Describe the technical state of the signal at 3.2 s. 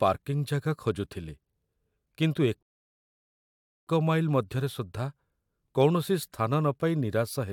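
At 3.2 s the speech is in the middle of a rebuffering stall running from 2.63 to 3.87 s. Playback exhausted its downloaded audio and halted until more data came in, inserting roughly 1.24 s of dead air. The speech cuts abruptly to silence, then picks up exactly where it left off with nothing missing. On a waveform this is a flat silent stretch; on a spectrogram, a blank vertical band with sharp edges.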